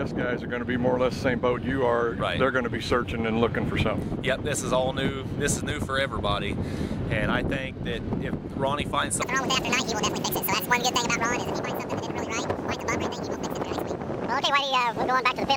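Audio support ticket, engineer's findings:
Section at the wrong speed, 9.22 s through to the end. Audio jumps to 1.85x, so everything's hurried and pitched up nearly ten semitones, close to an octave. Speed and pitch shift together, abrupt switch at the boundary. Likely a playback or edit stage clocking that segment at the wrong rate, probably a sample-rate mismatch on the tail. Worth checking the resample step on that last chunk.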